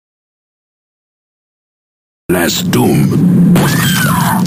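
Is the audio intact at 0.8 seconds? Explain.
No. At 0.8 seconds the clip sits inside a stretch of dead silence, with no room tone, running from the very start to about 2.30 s, where the sound comes back in mid-flow. This audio dropout to silence likely comes from a lost input, such as a disconnected device, a failed link or a stray mute, while recording carried on writing silence, so whatever happened there is gone.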